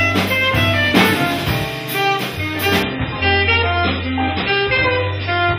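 At 2.83 s the sound abruptly turns dull and smeared, with nothing left above about 5.5 kHz and a watery, swirling character in what remains, and it stays that way to the end. There is no gap at the switch. This is an adaptive stream at a lower bitrate: the player dropped from a high-quality version, consistent with MP3 around 128 kbit/s, to one that points to roughly 16 kbit/s, so the encoder discarded the treble and left audible artefacts.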